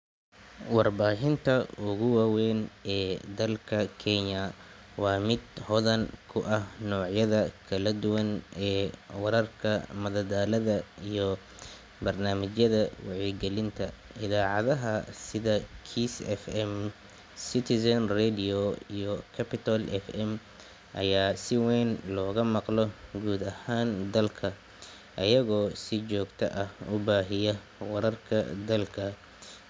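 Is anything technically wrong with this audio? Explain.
Yes. From 19.4 to 21.7 s the speech carries a resampler restarted on every block. The converter treated each 50 ms block in isolation, so at every block boundary it filled in missing neighbouring samples with silence or wrapped-around data, leaving a small error at each edge. The result is a steady ticking at 20 Hz, close to a low buzz, that follows the speech and drops out in pauses. It fits a 24 kHz to 16 kHz conversion.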